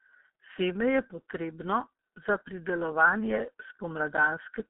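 G.723.1 codec damage runs from start to finish. The speech has been squeezed through a low-rate telephony coder, which fits a bitrate near 6 kbit/s, and the line passes only about 200 Hz to 3.7 kHz. The coder models the voice in coarse blocks and refreshes that model slowly, so the damage is heavy: the speech sounds muffled and hoarse, consonants smear into one another, and the missing high end leaves sibilants dull.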